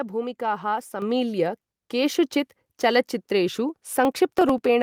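At 1.02 s the microphone volume steps up. The call software raises the input gain about 7 dB at once, so voice and background jump together.

From 4.05 to 4.65 s there is processor overload crackle. Around fifteen very short buffers are skipped, leaving hard-edged gaps heard as gritty tearing.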